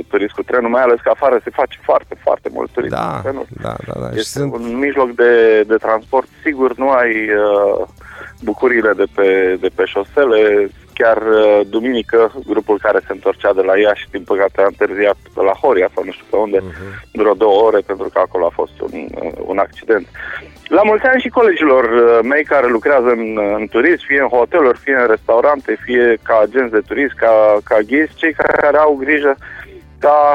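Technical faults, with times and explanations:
28.42 to 28.65 s, system hang loop. A single 46.44 ms slice of sound repeats exactly five times before the audio moves on. The system stalled briefly while the sound hardware kept replaying the same ring buffer, and the loop length fits a 2048-sample buffer. The slice repeats at 21.5 times per second. Practically no audio is lost.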